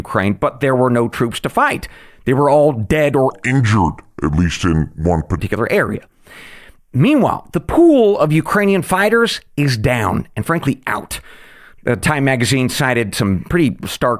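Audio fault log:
3.30–5.38 s, wrong sample rate: speech drops about 5.5 semitones and slows to 0.73x, fitting 44.1 kHz audio played at 32 kHz without conversion.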